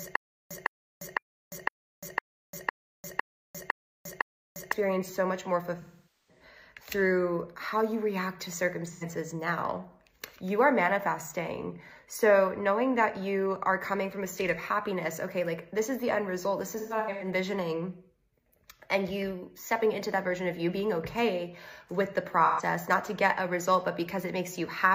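Stutter with silent gaps runs from the very start to 4.72 s, already under way when the audio begins: a 157 ms burst repeats every 507 ms, nine times, with about 349 ms of dead digital silence between repeats. The likely cause is a stalled player or stream that replays its last fragment at each retry and then runs dry, so the material that belonged in those gaps never plays. AAC frame loss with concealment follows at 5.81 to 6.44 s, 8.87 to 9.03 s, 16.71 to 17.27 s and 22.45 to 22.62 s. In each case the decoder covers the missing frames by rebuilding sound from the last good spectrum. The longest loss, about 470 ms at 5.81 s, smears and decays toward silence before the sound fades back in. The short 85 ms and 128 ms losses are brief smeared, noisy patches. At 16.71 s roughly 300 ms of loss is scattered across 430 ms, with the longest run around 150 ms, which gives a phasey stretch.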